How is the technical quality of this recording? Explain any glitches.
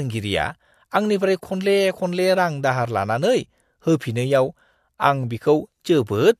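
No glitches or technical faults can be heard anywhere.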